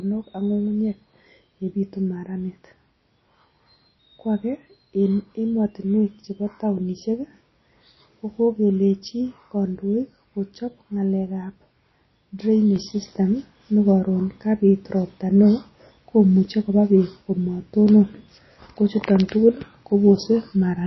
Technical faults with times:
0.00-20.87 MP3 compression
12.76-20.87 sudden gain jump

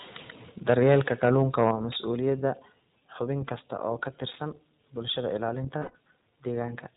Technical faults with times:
0.00-6.96 iLBC codec
0.67-1.97 microphone overload
1.71 microphone volume stepped down
2.73 microphone volume stepped down
3.57-3.61 microphone overload
4.31-4.38 microphone overload
5.78-5.96 lost iLBC frames

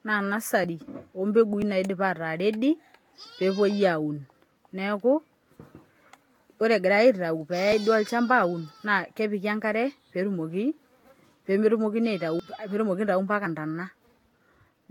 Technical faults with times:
0.00-14.90 generation loss
0.64 dropped buffer (overrun)
1.62 dropped buffer (overrun)
12.39 dropped buffer (overrun)
13.46 dropped buffer (overrun)

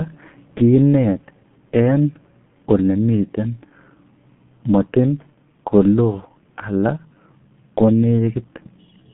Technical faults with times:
0.00-9.13 G.723.1 codec

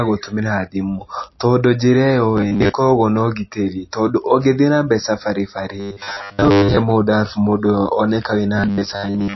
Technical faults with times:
0.00-9.36 MP3 compression
2.37-2.71 robotic sound from repeated short buffers
5.80-6.77 robotic sound from repeated short buffers
8.58-9.36 robotic sound from repeated short buffers

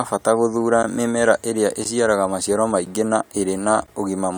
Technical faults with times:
1.84 gap between chunks
3.87 gap between chunks

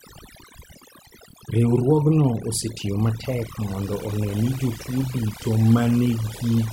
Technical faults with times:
0.00-6.73 overdone noise removal

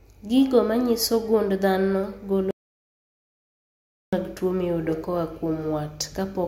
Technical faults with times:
2.51-4.13 audio dropout to silence

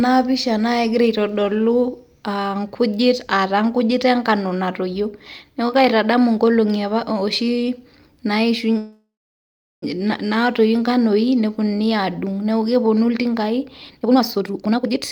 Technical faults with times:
8.77-9.84 call audio freeze
13.99-15.02 jitter buffer speed-up

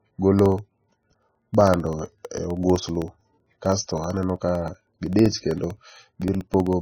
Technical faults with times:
0.00-6.82 MP3 compression
0.39-6.73 periodic USB or driver dropouts

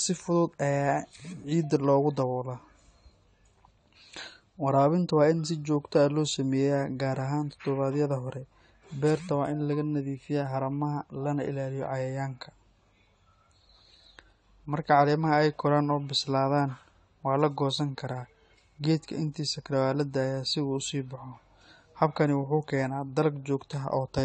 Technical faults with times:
0.00-24.25 AAC compression

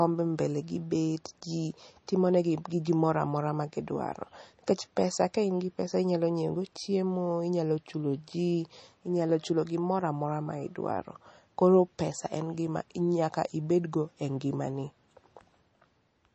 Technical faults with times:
0.00-16.35 MP3 compression

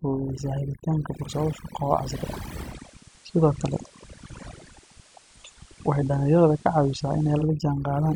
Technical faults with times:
0.00-8.16 overdone noise removal
2.61-7.50 digital radio blending to analogue

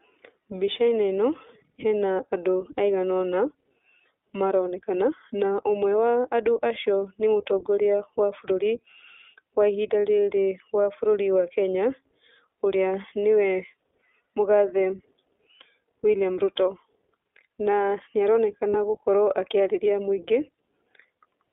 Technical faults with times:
0.00-21.53 iLBC codec
18.70-18.75 lost iLBC frames

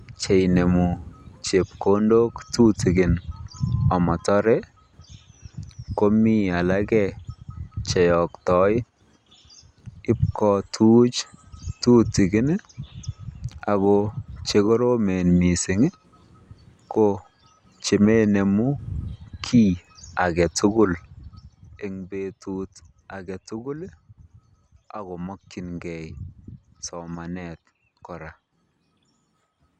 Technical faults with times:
20.79-22.05 zipper noise

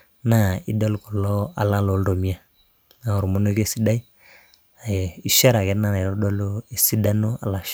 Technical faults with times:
none

